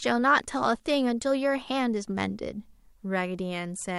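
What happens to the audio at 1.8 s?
Nothing goes wrong at 1.8 s; the speech carries straight through that point with no dropout, click or distortion.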